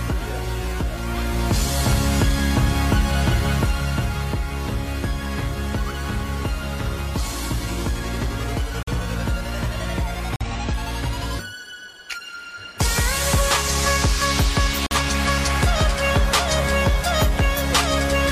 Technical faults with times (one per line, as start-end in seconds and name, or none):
8.83-8.93 corrupt frame muted
10.36-10.51 corrupt frame muted
14.86-14.96 corrupt frame muted